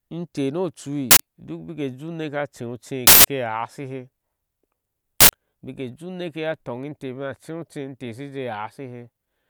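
A speech clip with three bursts of uninitialised buffer noise, at 1.11 to 1.20 s, 3.07 to 3.24 s and 5.21 to 5.29 s. Each is a sudden, loud blast of digital noise replacing the speech. The cause is a buffer played out before any audio was written into it, so stale memory came out as samples. The first and last last about 85 ms, which fits a 4096-sample block, and the middle one about 171 ms, fitting 8192 samples.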